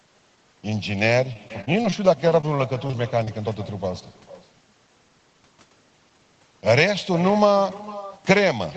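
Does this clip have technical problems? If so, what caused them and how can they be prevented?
Yes. Throughout the clip, every phrase is followed about half a second later by a fainter, thinner repeat, roughly 17 dB below the direct speech. This is echo with no canceller: the far end's loudspeaker feeds its microphone, and nothing subtracts that return path. Enabling acoustic echo cancellation, or having the far end use a headset, prevents it.

From 1.33 to 2.57 s the speech turns choppy, with about a dozen short holes of up to 20 ms each, adding up to roughly 14% of that stretch. This is repeated packet loss (robotic sound): the receiver keeps patching gaps by extending the last sound. A steadier network connection and a deeper jitter buffer prevent it.

Brief smears or wobbles occur at 2.87–2.91 s, 2.91–2.95 s and 3.25–3.29 s. This is short concealed packet loss: about 20 ms of audio arrived too late each time and was filled in before blending back into the real signal. 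Reducing network jitter and using forward error correction prevent it.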